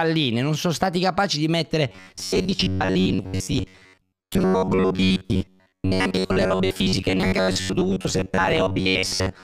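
From 1.89 s to the end, the speech turns robotic. A rigid, metallic buzz at 93.8 Hz sets in. The likely cause is robotic sound from repeated short buffers. A segment of about 10.7 ms loops for most of that stretch, replacing missing audio.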